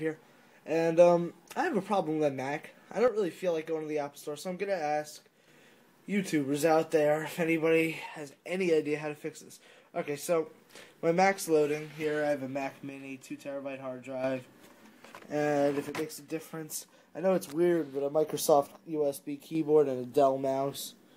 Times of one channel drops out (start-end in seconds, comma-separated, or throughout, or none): 3.08-5.48, 8.06-10.46, 12.89-14.24, 15.89-18.29, 18.75-19.55